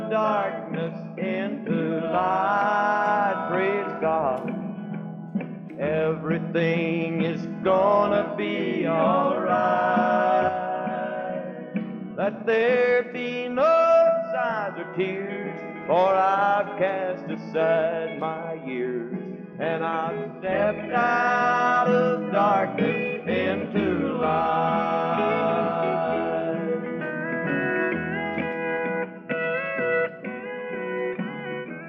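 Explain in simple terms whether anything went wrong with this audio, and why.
Nothing went wrong with this audio that a listener can pick out. There is no moment where a technical problem shows up.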